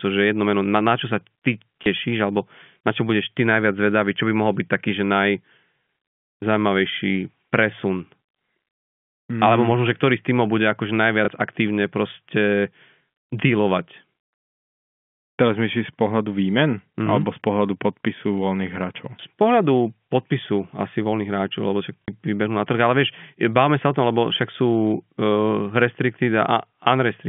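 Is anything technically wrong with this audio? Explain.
Yes. Packet loss with last packet repeated occurs at 1.84 s after "sa ty", at 11.25 s, and at 22.02 s. Each 30 ms gap, 60 ms at 22.02 s, was filled by replaying the previous chunk. The repeat misaligns with pitch; the single repeats at 1.84 s and 11.25 s sound like small blips, and the two-packet run at 22.02 s like a brief robotic stutter.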